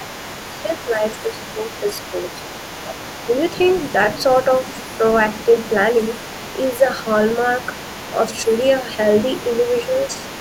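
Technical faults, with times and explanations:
0.00–0.19 s, 0.65–1.04 s, 1.30–1.44 s and 6.74–6.83 s, speech suppressed in double talk: the echo canceller likely could not tell the talker apart from the loudspeaker echo while both sides spoke, so it pulled the whole microphone signal down. The voice sinks by about 15 dB in the first dip and about 10 dB in the second, then by a shallower 5 dB or so in the last two, each lasting a fraction of a second before recovering.
Throughout, other side's voice leaking through: the echo canceller likely left part of the loudspeaker playback in the microphone signal, so a second voice sits under the talker for the whole clip. It stays faint, roughly 20 dB below the main speech.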